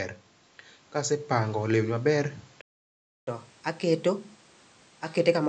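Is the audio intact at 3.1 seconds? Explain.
No. At 3.1 seconds the speech is caught inside a playback stall running from 2.61 to 3.27 s, a gap of about 0.66 s in which the output goes completely silent mid-flow before the speech resumes. The likely cause is the player running short of data or its thread being blocked until it recovered. On a waveform this shows as a flat line; on a spectrogram, a clean blank column across all frequencies.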